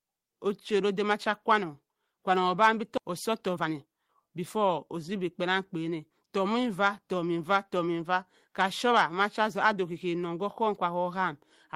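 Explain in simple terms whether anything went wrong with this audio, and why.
At about 2.97 to 2.99 s, the speech suddenly jumps forward. Roughly 0.7 seconds of it is simply gone, and the sounds on either side are stitched together with no pause. This is a skip ahead. Audio arrived late and piled up, so the receiver threw away a chunk of the waiting speech to catch up. It did not leave a gap.

Right after that, from about 3.11 to 5.08 s, the talking sounds rushed, running about 12% faster than normal, yet the voice does not get higher. This is a jitter buffer speed-up. The receiver was still holding more audio than it wanted, so it trimmed many tiny slivers, each only a vibration or two of the voice long, cutting about a fifth of a second in total to bring the delay back down.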